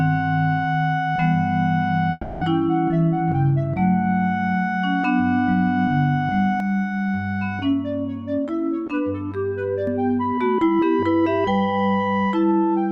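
From 2.11 to 2.44 s the audio breaks off and the gap gets papered over: what you hear is the last bit of sound smeared on as a fading buzzy tail for about 300 ms, and then things pick up again a little further on, with that stretch simply gone. That's most likely a long network dropout, where nothing arrived for a while and the receiver filled in rather than going silent. Later, from 6.60 to 9.87 s, the tone turns hollow and phasey. That's channel delay causing comb filtering. One side seems to be running late by roughly 10 ms, and when the two sides are folded down to mono, whatever they share cancels at regularly spaced points. The first notch sits somewhere around 50 Hz, with further notches about every 100 Hz above it, which is what gives that thin, hollow colouration.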